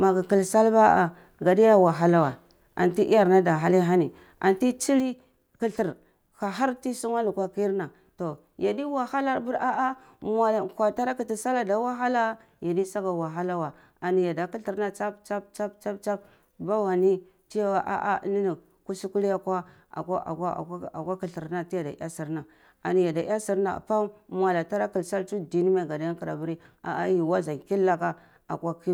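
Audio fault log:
5.0 s to end, sudden gain jump: the speech and its background noise drop together by about 6 dB from one sample to the next and stay there. This is likely a digital gain setting applied without a ramp, so the level steps instead of fading.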